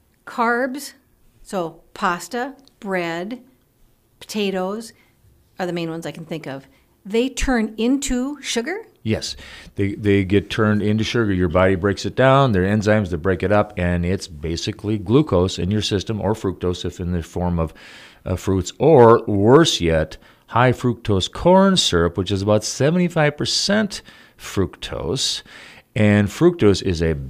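No technical faults detected.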